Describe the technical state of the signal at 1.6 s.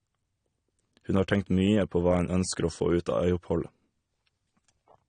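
At 1.6 s, as across the whole clip, the speech carries AAC compression artefacts, likely from low-bitrate AAC-LC around 32 kbps: nothing above 9.7 kHz, with dull, smeared, warbling sibilants.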